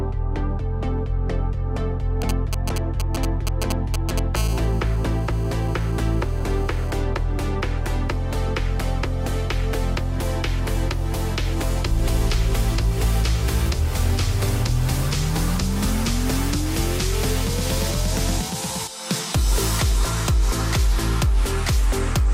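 From 2.22 to 4.19 s, a galloping dit-dit-dit of ticks and short buzzes breaks in, fairly loud against the sound. These are GSM signalling bursts: a nearby 2G phone's radio pulses rectified by the audio circuit. A hard, raspy 217 Hz GSM phone buzz follows from 4.36 to 6.91 s. It is steady and about 20 dB down, which fits a call. It returns intermittently from 17.09 to 18.50 s at about 16 dB down, which fits a data transfer.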